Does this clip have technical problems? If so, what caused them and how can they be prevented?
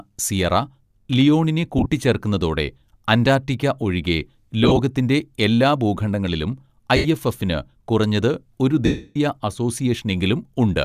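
Yes, there are lost LE Audio frames at 1.78–1.86 s, 4.64–4.80 s, 6.96–7.06 s and 8.86–9.16 s. The decoder repeats the last spectrum with scrambled signs, so the speech smears into noise instead of dropping cleanly to silence. The 300 ms loss fades away gradually. Keeping the Bluetooth link short and free of interference prevents this.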